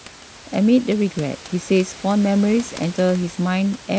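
Nothing has gone wrong anywhere in this speech, and the only other thing you'll hear is the room's own background noise sitting about 20 dB below it.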